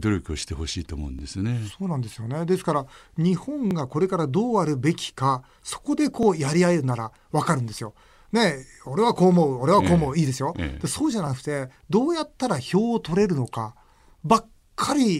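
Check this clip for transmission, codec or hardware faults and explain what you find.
The clip has one fault, overlapping chunks. A brief stutter, like a small click, recurs at 1.19, 3.71, 6.23, 8.75, 11.27 and 13.79 s. Each new 2.5 s chunk begins 20 ms before the previous one ended, so that sliver of speech plays twice at every join.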